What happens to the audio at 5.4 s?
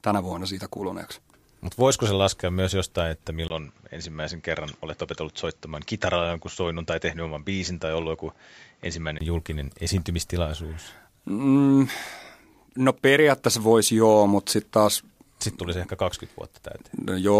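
At 5.4 s the speech is in a duller, boxier stretch that runs from 3.48 s, just after "laskea myös jostain että", to 9.21 s, where "julkinen esiintymistilaisuus" follows. Nothing comes through above about 7.6 kHz, the level drops by roughly 5 dB, and a new background noise sits about 40 dB under the speech. A brief gap of around 20 ms marks the switch. This is likely an input switched to a poorer device, with the narrower microphone path bringing its own tone and noise.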